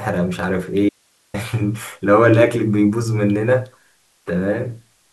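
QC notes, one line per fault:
0.89–1.34 s: audio dropout to a faint residue. The speech cuts out abruptly for about 0.45 s, leaving only low hiss roughly 40 dB below the signal, then returns mid-flow. The likely cause is a brief loss of the wanted feed while the downstream path stayed live.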